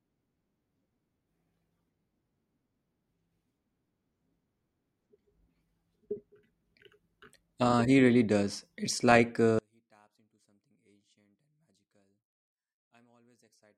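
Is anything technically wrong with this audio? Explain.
Yes. One channel inverted, from 9.59 s to the end at 13.77 s: the speech drops by about 39 dB to a faint residue, likely because one stereo channel's reversed polarity cancels the shared centre on mono summing.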